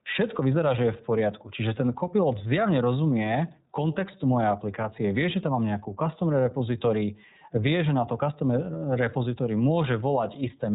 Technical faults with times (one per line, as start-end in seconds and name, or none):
0.00-10.74 iLBC codec